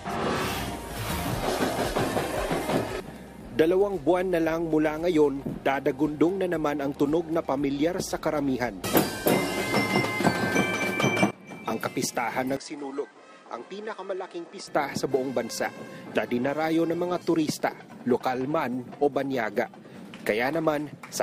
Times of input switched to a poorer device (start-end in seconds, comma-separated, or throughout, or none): 12.57-14.67